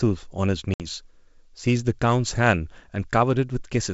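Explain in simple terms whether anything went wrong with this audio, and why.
Packet loss on an ADPCM call: a few packets vanished and the decoder lost track, leaving a 60 ms gap within 0.74–0.86 s before the speech steadies.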